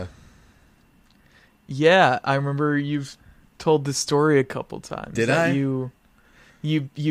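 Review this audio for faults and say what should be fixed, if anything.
Sample clock jitter runs from 5.88 s to the end at 7.10 s. The converter's timing wanders by roughly two microseconds. Steep, fast parts of the speech take the biggest errors, giving a faint hiss about 40 dB down. Use a stable, low-jitter converter clock.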